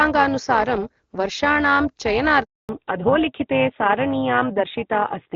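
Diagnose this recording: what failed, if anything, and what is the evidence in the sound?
The speech carries an overlap-add ripple from start to finish, in the call processing stage. Frames were windowed and rejoined with an overlap whose gains do not sum flat, so the level swings by about 11 dB once per frame, roughly 400 times a second. It sounds like a metallic buzz with extra tones around each note. On a waveform the envelope shows a dense periodic scalloping. A spectrogram shows sidebands around 400 Hz either side of each harmonic.

A handover gap sits in the network stage from 2.43 to 2.69 s, lasting 260 ms. During the switch between networks no speech frames arrived, so the sound decays within a few tens of milliseconds and stays silent until the new link delivers audio. The waveform drops to a flat line across that span. The spectrogram shows a clean vertical blank band through every frequency.

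Right after the gap, at 2.69 s, comes a fallback to narrowband, also in the network and codec stage. It persists to the end of the clip. Before the gap, wideband AMR-WB is working normally and content reaches up to about 7 kHz. Afterward nothing exists above 4 kHz, and the voice turns duller and rougher. That fits a renegotiation to AMR-NB at 12.2 kbit/s. On a spectrogram the upper region goes abruptly empty at 2.69 s, leaving a hard ceiling at 4 kHz.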